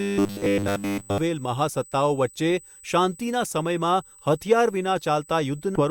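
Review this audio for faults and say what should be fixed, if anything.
There's a steady USB whine running the whole way through, a fixed tone at 8 kHz sitting about 25 dB below the speech. That pitch points to the bus's 125-microsecond microframes: the current draw pulses at that rate and leaks into the audio through the power or ground. It never moves in pitch, which is the giveaway. To prevent it, power the interface separately or break the ground loop with an isolator or a better-filtered hub.

From 0.01 s to 1.18 s the speech turns into a rigid metallic buzz at 100 Hz. It still roughly tracks the speech, but it sounds robotic throughout that stretch. This is likely robotic sound from repeated short buffers. Fresh audio isn't arriving in time, so the playback side keeps looping the last chunk and skips the real material. A 100 Hz buzz fits a repeated buffer of about 10 ms. To prevent it, give the capture or playback chain a larger buffer, or fix whatever is starving it.

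There are two spots where compressed frames were skipped and the audio jumps forward. The first, at 0.37–0.40 s, loses about 70 ms, around three frames. The second, at 5.75–5.81 s, drops about 200 ms, roughly ten frames. The jump sizes fit 20 ms codec frames. To prevent it, re-encode or re-transfer from an intact source so the decoder gets every frame undamaged.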